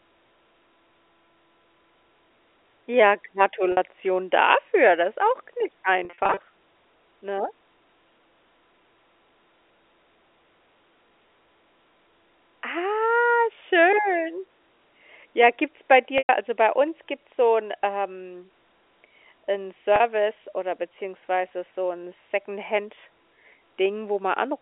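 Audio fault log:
3.72–3.77 s, 6.05–6.39 s, 16.18–16.29 s, 19.96–20.00 s: packet loss with pitch repetition. The receiver fills each gap by repeating the last pitch period, so the sound briefly holds with a buzzy, sustained quality. The gaps last 50 ms, 210 ms, 110 ms and 40 ms. The 6.05 s event, after "ist auch gar nicht", is a scatter of short losses of up to 40 ms each across 340 ms. The 16.18 s gap falls between "gibt's bei" and "also bei uns gibt's", and the 19.96 s gap comes just before "oder beziehungsweise so 'n". The 10 ms granularity fits 10 ms packets.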